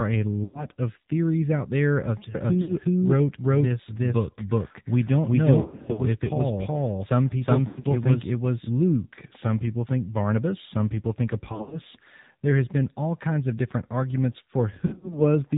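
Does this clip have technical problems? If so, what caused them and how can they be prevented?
Yes. There are three kinds of fault.

The whole clip carries the sound of the AMR narrowband mobile codec. Nothing passes above 4 kHz, so a spectrogram shows a hard ceiling at that frequency with empty space above it. The speech sounds buzzy and synthetic because it is rebuilt from a sparse pulse-driven vocal tract model. That level of damage fits a low mode around 7.4 kbps. To prevent it, carry the call over a wideband or higher-rate codec.

Lost AMR speech frames occur at 0.44–0.66 s, at 2.62–2.72 s just after "theories out there of", at 5.62–6.02 s, at 7.68–7.86 s, at 11.52–11.79 s, and at 14.86–15.22 s just after "kinds of different arguments". In each spot the decoder repeats its last good pitch and filter settings at falling gain, so the sound smears, warbles, and sags. A waveform shows the envelope dipping, and a spectrogram shows blurred, frozen harmonics. 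To prevent this, improve radio coverage or use stronger channel protection.

A doubled audio track runs from 2.35 to 8.69 s. A second full-band copy, about as loud as the original, trails it by roughly 0.4 s, with no decay or room colour, and it starts and stops abruptly. A waveform shows the same shapes repeated a fixed distance apart, and a spectrogram shows each harmonic pattern duplicated. The likely cause is a second, slower capture path or an overlapping edit. To prevent it, route only one capture path into the mix and check edits for overlaps.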